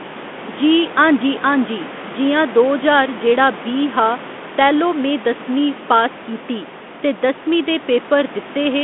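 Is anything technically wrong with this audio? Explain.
No, nothing technically wrong stood out on listening to this speech clip.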